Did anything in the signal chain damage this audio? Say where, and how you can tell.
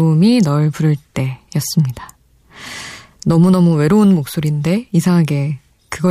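No, nothing in the signal chain damaged this audio.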